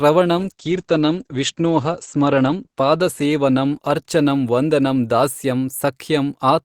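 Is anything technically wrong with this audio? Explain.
Yes, there's a call bitrate drop from 0.38 s to 6.11 s. The bandwidth estimate fell and the encoder starved, with the bitrate dropping from about 48 kbps to 11 kbps. Highs above 8 kHz vanish and the speech turns coarse and watery, worst for about 1.66 s.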